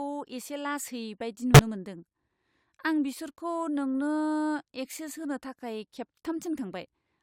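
At 1.54 s the speech jumps forward. Compressed frames were skipped, so about 20 ms of audio never plays. The decoder lost or rejected those frames. The join lasts until 1.59 s.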